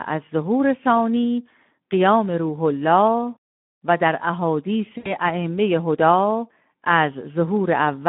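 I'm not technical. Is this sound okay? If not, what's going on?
No. The whole clip has the Speex codec's sound: a low-quality speech compressor that makes the voice hoarse, rough and narrow, like an old phone call. From 4.97 to 5.11 s there is VoIP packet loss concealed by the speech codec. About 80 ms of sound was lost, and the decoder filled it with a fading guess.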